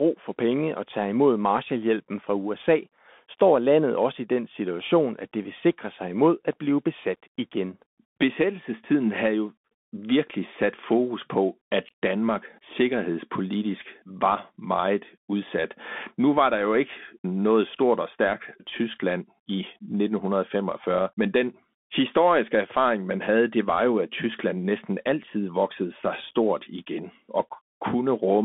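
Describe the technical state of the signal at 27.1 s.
At 27.1 s the speech passes through a Bluetooth CVSD headset codec, present for the whole clip. It sends one bit per sample, up or down, with an adapting step. The band sits near 200 Hz to 3.5 kHz. Sibilants sound scratchy, with granular hiss beneath.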